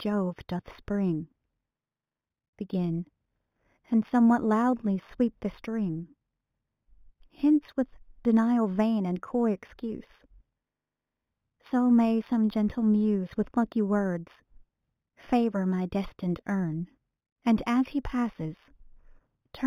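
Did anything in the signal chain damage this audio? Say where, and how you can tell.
Yes. At the sample-rate conversion stage, the audio was upsampled by linear interpolation, which fits a source near 8 kHz raised to 44.1 kHz. The weak filtering dulls the top of the band and leaves faint mirror images roughly 35 dB down between 4 and 8 kHz. Throughout the speech, this adds a light metallic shimmer to sibilants.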